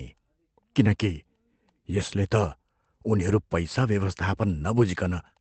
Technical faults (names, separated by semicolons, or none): lost packet rebuilt from error correction